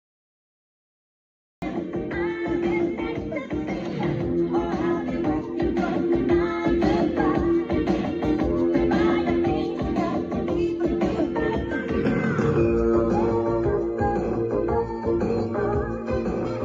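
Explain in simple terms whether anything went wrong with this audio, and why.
Cut-off start, 0 to 1.62 s: the recording began late, so digital silence runs until 1.62 s, then the sound appears abruptly mid-way, with no natural beginning.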